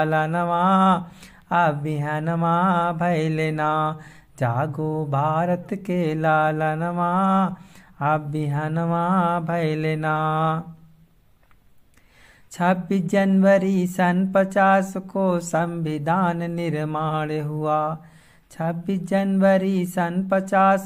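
No technical faults can be heard anywhere in this audio.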